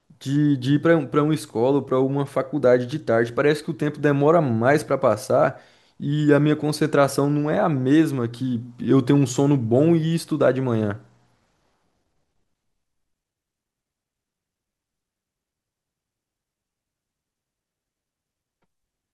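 Nothing goes wrong anywhere in this bit of speech, so there's simply no technical fault to point out.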